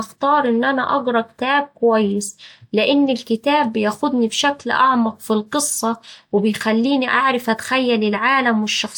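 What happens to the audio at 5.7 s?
Nothing goes wrong at 5.7 s; the speech carries straight through that moment with no dropout, click, glitch or other fault.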